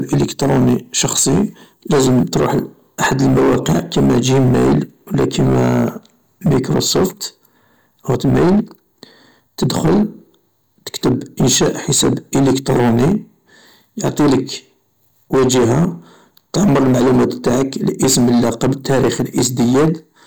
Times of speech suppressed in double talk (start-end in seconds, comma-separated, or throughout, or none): none